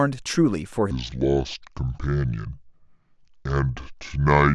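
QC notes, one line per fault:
0.91–4.54 s: section at the wrong speed. From 0.91 s to the end, the speech runs at 0.626 times its recorded rate, so it is drawn out and slowed, and pitch falls with it by about seven semitones, giving voices a deep, sluggish character. Speed and pitch drop together at a single point, which likely comes from the section being played or resampled against the wrong clock rather than from any change in the talker.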